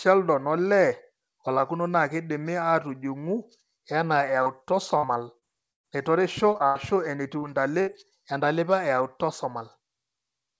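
Speech over a call path whose G.722 coding leaves nothing above 8 kHz suffers short concealed packet loss at 4.43 to 4.49 s, 6.53 to 6.63 s (two adjacent holes) and 7.39 to 7.45 s: about 30 ms of audio each time arrived too late, and the receiver bridged it by extending the preceding sound, heard as a brief smear or wobble. From 4.97 to 5.87 s, repeated packet loss (robotic sound) struck four times, the longest hole 118 ms, with roughly a quarter of that stretch synthesized, so the speech turns choppy with pieces missing. Two bursts of packet loss, about 90 ms at 6.66 to 6.78 s and 60 ms at 7.81 to 7.90 s, were filled by a fading continuation, giving a held buzz or hiss before the speech resumes with that part gone.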